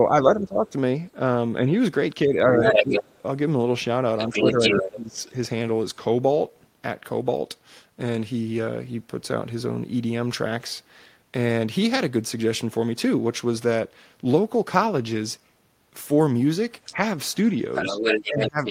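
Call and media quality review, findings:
Speech suppressed in double talk at 0.0–0.75 s, 2.25–3.14 s, 4.28–5.18 s, 16.95–17.01 s and 17.92 s to end: dips up to about 20 dB, likely echo canceller ducking the near talker during overlap.

Other side's voice leaking through at 2.64–3.18 s, 4.18–5.31 s and 16.85 s to end, from speech level up to about 5 dB above it: likely residual loudspeaker echo not removed by the echo canceller.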